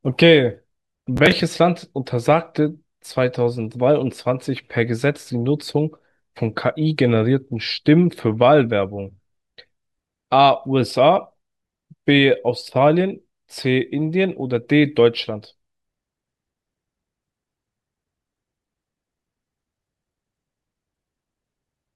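From 1.16 to 1.40 s there's processor overload crackle. Several short buffers, around 10 ms each, miss their deadline over that stretch, and each repeats a scrap of stale audio, so the speech gets a gritty tearing.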